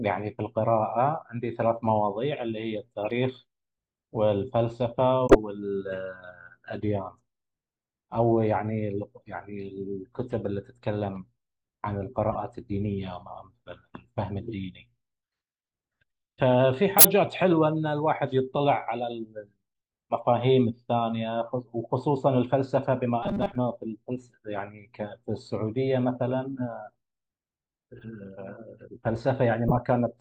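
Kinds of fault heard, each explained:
corrupt frame muted: damaged frames the decoder rejected were replaced by silence; at 3.02 s the speech abruptly drops out for about 84 ms.
corrupt frame decoded: damaged frames played anyway put energy at wrong frequencies, giving brief chirps or noise bursts at 5.26, 12.32, 16.97, 27.99 and 29.68 s.
robotic sound from repeated short buffers: from 23.23 to 23.55 s speech becomes a rigid metallic 200 Hz buzz, likely from repeating a 5 ms stretch; it is sustained and pitched, unlike momentary blips.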